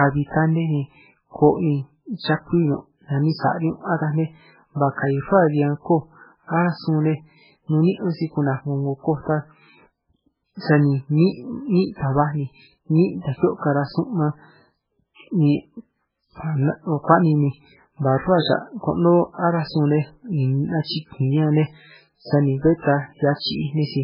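From start to finish the speech sounds watery and swirly, with nothing above 5.2 kHz and s sounds reduced to a smeared, metallic chirp. The damage is heavy and points to MP3 compression, likely at a very low bitrate of around 8 kbps. Starved of bits, the encoder cut the treble at a fixed point and zeroed weaker frequency lines, which flicker on and off between frames, producing the swirl and blurring the onsets.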